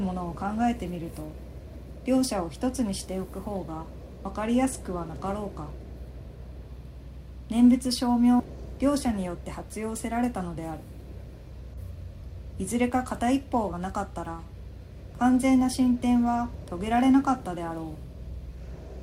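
At 8.39–8.42 s the sound jumps ahead with a blip, likely a skipped stream segment; waveform and spectrogram show an abrupt vertical break.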